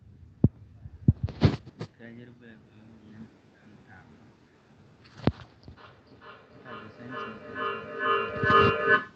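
A speech recording where, from 5.77 s to the end at 9.16 s, each phrase returns roughly every 0.4 s, thinner and ringing, building up to about the speech's own level. That is feedback echo between two devices: one device replays the other's microphone, which picks it up again, so the loop keeps recirculating.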